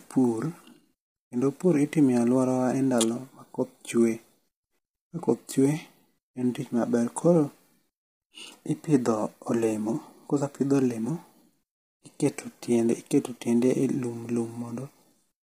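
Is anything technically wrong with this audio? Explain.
Yes. Throughout the speech there is heavy damage consistent with low-delay AAC compression, likely AAC-ELD at a low bitrate, with the roughness pointing to something near 24 kbps. Its short frames cannot separate the voice's harmonics cleanly, so the voice sounds rough and grainy, with noise filling the gaps between harmonics. On a spectrogram the harmonic stripes look smeared and speckled, and everything stops sharply at about 15.6 kHz.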